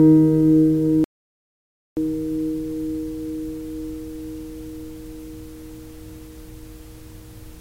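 The input path likely dropped out, leaving the recorder writing silence: in this sound clip, an audio dropout to silence runs from 1.04 to 1.97 s, erasing about 0.93 s.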